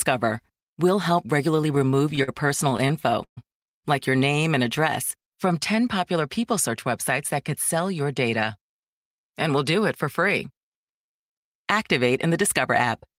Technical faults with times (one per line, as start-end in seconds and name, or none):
1.75-2.30 repeated stalls (stutter)
2.70-3.39 repeated stalls (stutter)
6.00-6.72 jitter buffer speed-up
8.96-9.65 jitter buffer speed-up